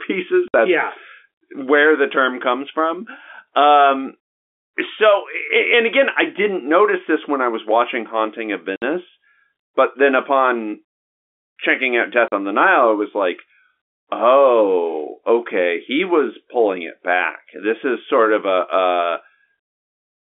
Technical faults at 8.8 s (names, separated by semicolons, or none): packet loss filled with silence